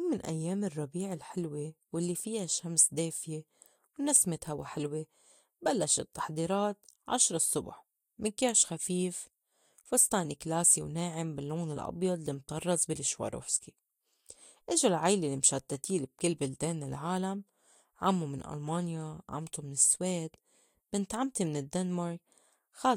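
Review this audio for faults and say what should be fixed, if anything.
Hard clipping occurs three times: from 2.79 to 2.81 s, just after "الرّبيع الحلوى والّي فيا"; at 4.15 s, just before "هوا حِلوة بلّشت التّحضيرات"; and from 10.67 to 10.71 s, just before "وناعِم باللّون الأبيض المطرّز". Peaks overshoot the stage's ceiling by about 2 dB and are sliced flat, heard as a brief crackle. The waveform shows squared-off tops, and a spectrogram shows thin vertical streaks of harmonics rising high up. Reducing gain before that stage by a few dB, or adding a limiter ahead of it, would prevent this.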